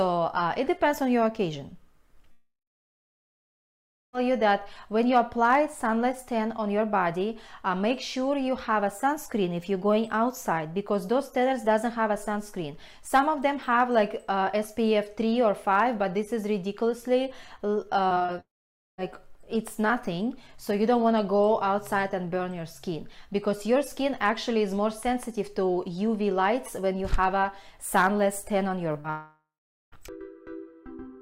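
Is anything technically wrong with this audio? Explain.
Yes, there are network faults.

Long network dropout at 2.31–4.15 s, 18.40–19.00 s and 29.10–29.94 s: the stream most likely stopped arriving for about 1.8 s, 0.58 s and 0.82 s. A fading continuation gives way to silence lasting about 1.6 s, 0.5 s and 0.46 s, and the audio resumes further on with the gap's content gone, unlike brief concealment.

Repeated packet loss (robotic sound) at 18.09–18.30 s: five gaps, the longest 22 ms, leave about 44% of that span concealed. Each hole is patched by extending the previous sound before the next arrives, so the sound turns choppy rather than falling silent, just before the second dropout.

Short concealed packet loss at 28.92–28.96 s (20 ms) and 29.00–29.06 s (about 40 ms): the decoder bridged each hole by extending the preceding sound and blending back. These come across as a brief smear or wobble with no silence, right before the final dropout.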